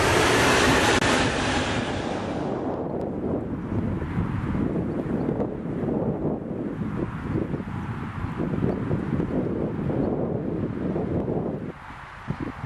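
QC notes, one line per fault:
No fault to note.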